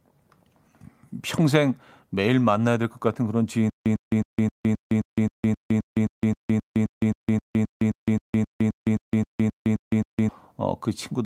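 A single sharp pop sits on top of the speech from 1.38 to 1.40 s, peaking about 5 dB above the surrounding level, with the talking continuing underneath. This loud pop is likely an electrical transient, such as a plug being seated, a switch, a static discharge or a driver glitch, that put a sudden voltage step into the signal chain. The circuitry downstream shaped it into this brief, hard click.

From 3.70 to 10.29 s the speech stops moving forward. A fragment about 101 ms long repeats 25 times, each repeat followed by roughly 163 ms of dead digital silence, so the burst comes back every 264 ms at a steady mechanical rhythm. This stutter with silent gaps is likely a stalled player or stream that replayed its last buffered fragment on each retry and then ran empty. The audio that should have filled those six and a half seconds is gone.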